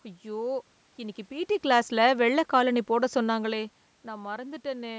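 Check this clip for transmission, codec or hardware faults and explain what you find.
No transmission, codec or hardware fault is audible in the speech; the absence of content above 8 kHz comes from the call's microphone processing, the background is room noise, and the level shifts around 1 s and 3 s are the talker moving relative to the microphone.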